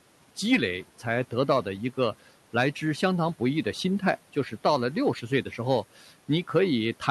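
From 5.96 to 6.11 s, a short stretch of speech is cut by the noise suppressor: the suppressor mistakes part of the speech for background and turns it down by as much as about 9 dB for roughly 150 ms, so that moment sounds swallowed and faint. Unlike a packet dropout, the sound never breaks into silence or clicks. It sinks smoothly, while the room noise, sitting about 23 dB below the speech, is turned down along with it.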